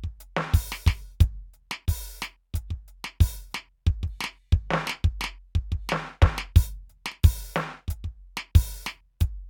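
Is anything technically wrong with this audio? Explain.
No, nothing is technically wrong with this music audio.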